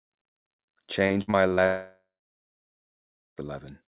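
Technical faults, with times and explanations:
1.07–1.60 s, repeated packet loss (robotic sound): five short holes, the longest 53 ms and about 180 ms in total, are each patched by repeating the preceding sound. This makes about a third of the span choppy. A spectrogram shows smeared, stuttering bands and the waveform shows abrupt breaks.
1.66–3.45 s, long network dropout: about 1.7 s of audio never arrives, likely because the connection stalled. The last sound is stretched into a fading buzz, then about 1.3 s of near-silence follows. On a spectrogram this is a brief blur and then a blank gap, and on the waveform a flat line before the sound resumes.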